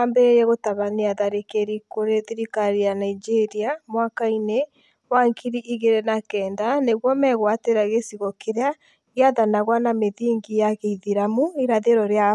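No technical faults can be heard anywhere in the speech recording, and the signal holds steady throughout.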